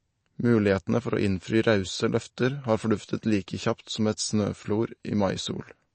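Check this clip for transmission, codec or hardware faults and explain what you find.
One codec fault runs through the whole speech clip: the sound carries the marks of MP3 compression, and that is the likely cause. Nothing is present above 8.3 kHz, a hard ceiling where the encoder discarded the treble to save bits, which fits a low bitrate of around 36 kbps. The damage is plainly audible: weak frequency lines drop in and out between frames, giving a watery, swirling texture, and s sounds turn metallic and chirpy.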